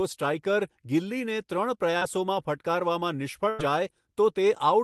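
A speech recording carried over a call line. At 1.97 to 2.03 s there is short concealed packet loss. About 40 ms never arrived, and the decoder patched the hole by extending the preceding sound, leaving a brief smear. At 3.49 to 3.61 s comes a burst of packet loss. Roughly 100 ms went missing, heard as a held, fading continuation before the speech resumes further along.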